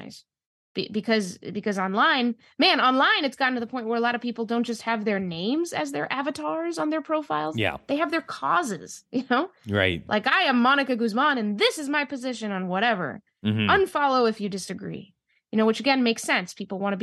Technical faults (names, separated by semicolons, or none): none